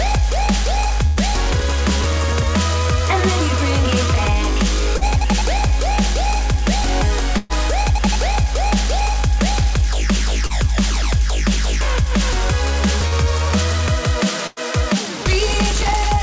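At 1.07–1.2 s, 7.38–7.53 s and 14.47–14.59 s, a burst of packet loss dropped about 90, 120 and 90 ms of audio. The receiver stretched the last sound into a fading buzz or hiss, then jumped ahead. At 4.98–5.04 s, 10.47–10.53 s and 13.08–13.15 s, short concealed packet loss left roughly 30 ms holes, patched by extrapolation and heard as brief smears or wobbles. From 15.32 to 15.93 s, processor overload crackle appears: dozens of tiny buffers, each a millisecond or two, missed their deadlines and dropped to silence, producing gritty tearing. The band stops at 8 kHz, which fits G.722 at 64 kbps.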